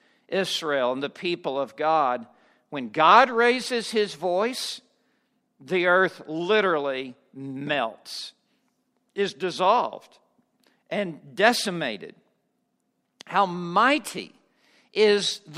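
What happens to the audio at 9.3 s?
At 9.3 s the speech carries on intact, with no dropout, click, distortion or other fault at that moment.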